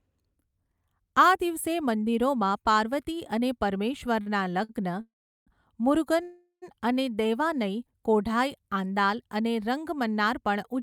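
At 4.21 to 4.28 s and again at 4.64 to 4.71 s, a packet arrived late and the jitter buffer ran dry. The receiver held the last sound for about 44 ms and then 50 ms, giving two brief stalls with a faint buzzy smear before the speech resumes intact.

Two call audio freezes follow, likely from packets held up in transit. From 5.01 to 5.49 s the sound drags on as a fading buzz into about 370 ms of silence. From 6.23 to 6.64 s it holds for about 390 ms, with 90 ms silent, before continuing where it stopped.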